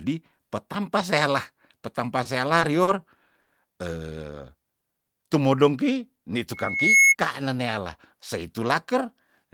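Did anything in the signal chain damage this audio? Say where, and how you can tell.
Yes. Short stalls from late packets at 2.23, 2.59, 2.83 and 3.41 s: sound is held for 20, 20, 40 and 60 ms, then resumes. Late network packets emptied the jitter buffer.

Loudspeaker feedback squeal from 6.53 to 7.15 s: a 2.2 kHz tone swells over roughly 0.4 s to about 10 dB above the speech. A microphone-to-loudspeaker loop exceeded unity gain.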